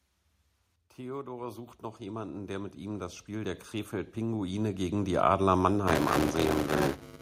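From 0.96 to 5.51 s, automatic gain rising: the gain control judged the input too quiet and steadily raised its gain by about 19 dB, so the voice and background swell together. From 5.87 s to the end, buffer tearing: the writer and hardware reader of the ring buffer have slipped, so roughly a fifth of each buffer replays audio about 10 ms old with hard joins, producing a robotic 200 Hz buzz that fits a 5 ms period.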